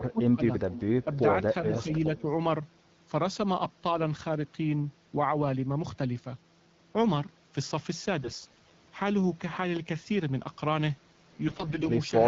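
Speech suppressed in double talk, 0.00 to 0.44 s and again 2.06 to 2.25 s: the voice is pulled down while the far end is also active, most likely because the echo canceller could not tell the local talker from loudspeaker echo and attenuated both. In the opening stretch the level sinks by about 20 dB across roughly 400 ms. The later dip is shallow, about 5 dB, lasting around 70 ms.

Echo leak, 2.16 to 2.32 s: a faint, delayed copy of the voice returns 356 ms behind the original, sitting about 25 dB below the speech. This is likely residual echo that the far side's canceller failed to remove from its microphone pickup and sent back down the line. It is heard as a brief ghost of the voice overlapping the tail of the second double-talk dip.

AMR bit errors, 8.23 to 8.73 s and 11.48 to 11.86 s: the voice keeps its pitch and loudness but turns hoarse, scratchy and gargly. Flipped bits in the weakly protected parts of the frames misplace the excitation pulses and corrupt the finer gain, pitch and spectral values, while the core checksum still passes. 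The error rate is around 10 percent in the first burst, with 24 frames hit, and about 15 percent in the second.

Loud pop, 9.76 to 9.79 s: a single sharp click peaks about 5 dB above the surrounding signal while the speech carries on underneath. This is likely a sudden voltage step or spike from a switch, static discharge or driver glitch, shaped by the downstream circuitry. The AMR wideband (HD Voice) codec path runs throughout with light coding texture, which fits its 12.65 kbit/s mode.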